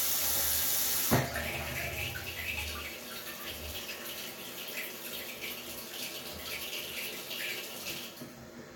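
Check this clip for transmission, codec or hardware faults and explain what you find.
No transmission, codec or hardware faults turned up here.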